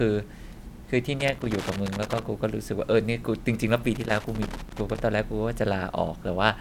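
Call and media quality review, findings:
Loose connector crackle, 1.20–2.23 s and 3.95–5.00 s, each about 1 s. Worn or dirty contact making and breaking, chopping the speech signal. Waveform shows jagged dropouts and spikes. Spectrogram shows scattered broadband vertical streaks. Suspect cable or jack.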